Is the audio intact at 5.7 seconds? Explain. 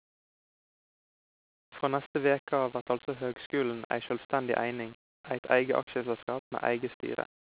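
Yes, the speech at 5.7 seconds is intact, with no fault at that moment.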